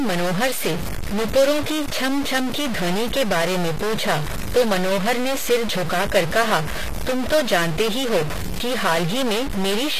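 Right from the start and running the whole way through, there's a layer of digital distortion riding on the speech, and it sticks around in the pauses too, where the quiet gaps fill with noise instead of going silent. That's the signature of a stuck bit, most likely a data line or converter with one bit frozen at 0 or 1. About half the sample values end up off by that bit's weight, and because the bit also flips with the sign of small values, even near-silence picks up hash.

Also present throughout is plainly audible codec damage, and it sounds like HE-AAC compression at a low rate, something in the region of 24 kbps. Nothing makes it above 14.9 kHz. The treble that is there isn't the original. It's rebuilt by spectral band replication, copying lower bands upward and shaping them with a coarse envelope. Harmonics don't line up across the crossover, so s sounds come out gritty, metallic or lispy.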